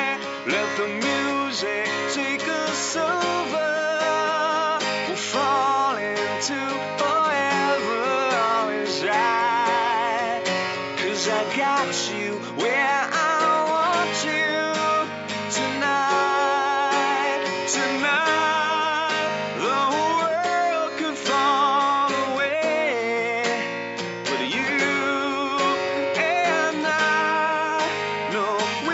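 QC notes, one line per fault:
No faults heard; nothing to flag.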